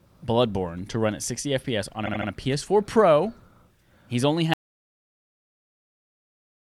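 At 2.05 s the speech stutters. These are repeated frames. A short block of about 78 ms plays again three times, to 2.29 s, adding about 235 ms. That fits a run of compressed frames stored or sent more than once.

At 4.54 s the sound cuts out to an audio dropout to silence. It lasts to the end of the clip. The gap is silent with no room tone. The likely cause is a lost input while the recorder kept writing silence.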